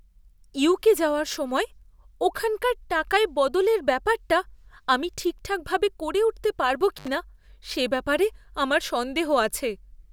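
At 6.96 s an intermittent contact briefly opens the line: the speech drops out for about 68 ms under faint hiss, with crackle at each edge. On a spectrogram this shows as a near-empty gap flanked by vertical broadband clicks.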